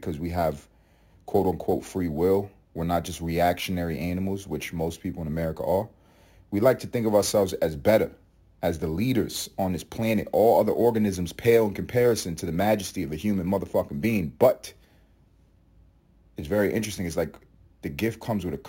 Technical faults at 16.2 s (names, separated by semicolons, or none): imaging from sample-and-hold upsampling